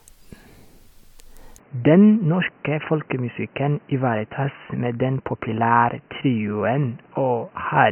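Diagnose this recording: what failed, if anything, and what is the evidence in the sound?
At 1.58 s the speech abruptly turns dull and boxy: nothing above 3 kHz remains, the level falls by about 5 dB, and a new background noise appears roughly 35 dB under the speech. There is no gap at the transition, and the change persists to the end. This points to the driver or device-selection stage, most likely an input switched to a poorer device, such as a headset's band-limited call profile, with its own response, gain and noise floor.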